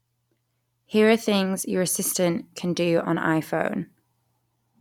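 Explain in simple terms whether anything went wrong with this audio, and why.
Nothing went wrong here: no dropouts, glitches, distortion or other technical faults turn up anywhere in the recording.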